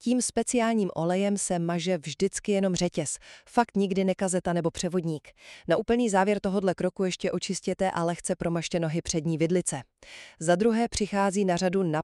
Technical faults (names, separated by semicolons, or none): drift correction step